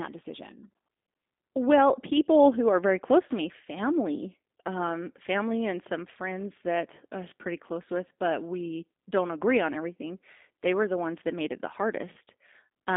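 Throughout, the speech carries G.729 codec damage: it is rebuilt from a vocal tract model and sparse pulses, which fits an 8 kbit/s G.729A stream. Nothing passes above 3.7 kHz or below 250 Hz, and unlike simple band-limiting, the voice sounds plainly rough and synthetic.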